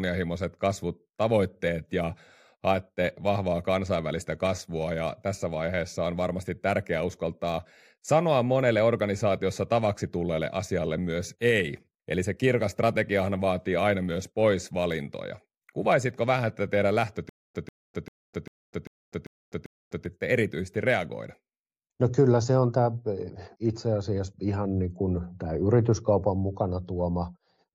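Speech, with a stutter with silent gaps from 17.29 to 20.06 s after "vähän tätä teidän": a 142 ms burst repeats seven times, each followed by 253 ms of dead silence, likely a stalled stream replaying its last fragment.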